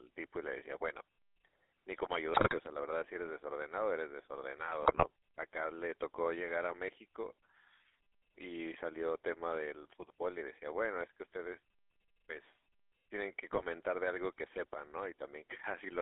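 GSM full-rate codec coding runs through the whole speech clip. The voice has been passed through a vocal-tract model driven by regularly spaced pulses, with much of the excitation detail discarded, which fits a 13 kbit/s full-rate coder. The result is a buzzy, gravelly roughness, and the damage is plainly audible. The band is confined to roughly 300 Hz to 3.6 kHz, so the sound is thin and boxy, with no low body and no air above the cut-off.

GSM bit errors break up the decoded speech three times, at 2.34 to 2.58 s, at 4.82 to 5.05 s and at 13.52 to 13.65 s. Corrupted bits in the filter, pitch and gain parameters reach the decoder, so individual frames come out with a warped spectrum or an inflated level. Each burst sounds like squawks, pops and gargling. The first is the longest and has the densest errors, spread across several consecutive frames. The last is the shortest.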